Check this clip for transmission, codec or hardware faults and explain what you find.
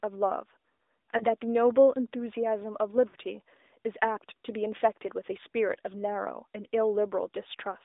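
Two faults are present: AMR narrowband mobile codec coding throughout, and lost AMR speech frames at two points.

AMR narrowband mobile codec, whole clip: the speech is confined to roughly 300 Hz to 3.7 kHz and sounds buzzy and synthetic. The pulse-driven vocal-tract model fits a mid-rate mode around 10 kbps. The buzz, not just dullness, separates it from a plain low-pass.

Lost AMR speech frames, 1.18–1.24 s and 3.08–3.16 s: the decoder repeats its last good settings with falling gain. The first event is a brief 20 ms-scale warble. The second smears and fades over about 60 ms. These are soft fades, not the hard clicks of a simple dropout.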